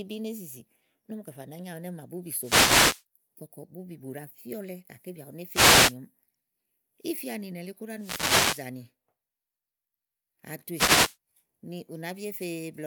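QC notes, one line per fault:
2.38–3.04 s, 5.49–5.96 s, 7.95–8.71 s, 10.72–11.17 s: wireless microphone noise hits. Each is a half-second to three-quarter-second swish of static over the speech, as the FM radio link fades when reflected paths cancel and the receiver's own noise floor rises into the audio. On a spectrogram each shows as a broadband hiss block across the full band masking the speech harmonics. The waveform shows a thickened noisy envelope for each event.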